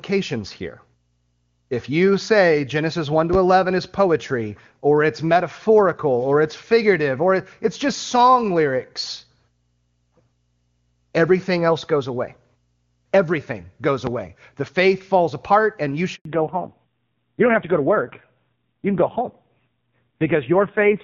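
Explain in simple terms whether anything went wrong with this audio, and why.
Two loud pops, at 3.33 s and 14.07 s, are single sharp clicks riding over the speech, which carries on underneath, likely from a plug, switch or static discharge. At 16.15 s a handover gap cuts the voice to silence for 100 ms as the call switches networks. Unlike a pop, nothing is heard and speech is lost. From 16.25 s to the end, a fallback to narrowband removes everything above 4 kHz. The voice stays continuous but sounds duller and rougher, where the earlier HD Voice sound was clear.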